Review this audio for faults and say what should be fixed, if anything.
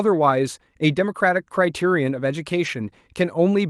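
A lost packet rebuilt from error correction occurs at 2.65 s. One 20 ms stretch, which fits a single lost packet, was filled from the low-bitrate copy that Opus carries inside the following packet, so there is no gap. That frame is coarser and noisier than the 12 kHz-wide Opus audio around it. To prevent it, reduce packet loss on the network path or raise the error-correction bitrate so rebuilt frames hold more detail.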